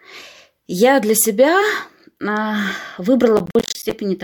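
From 3.37 s to 3.92 s the speech breaks into processor overload crackle. For just over half a second the processing could not keep pace with its deadlines, so a run of roughly twenty short buffers, each around 10 ms, went unfilled and were replaced by silence. Each dropout opens a brief hard-edged hole in the signal, and packed this closely they merge into a gritty, tearing crackle over the speech, ending as the load clears.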